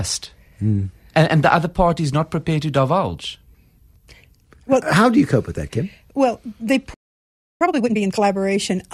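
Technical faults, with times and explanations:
6.94 to 7.61 s, playback stall: the speech cuts out in mid-flow and the output sits silent for about 0.67 s before sound returns. Nothing fades or decays into the gap; the signal simply stops, as if the player had nothing left to hand to the output. The likely cause is that its buffer ran dry or its audio thread was held up, so the device got no new samples until the player recovered and resumed feeding it.
7.61 to 8.27 s, time-compressed catch-up: right after the silence the speech comes back hurried, running at about twice normal speed yet at its usual pitch. Having fallen behind during the stall, the player works off the backlog by dropping short slices of audio and cross-fading the remaining pieces together. That shortens the timeline without resampling, which is why the pitch holds.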